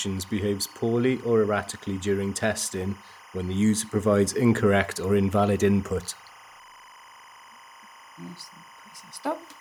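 Linear timecode at 25 frames per second leaks into the speech throughout, a faint chirping warble alternating near 1 and 2 kHz, well below the voice: timecode bleed.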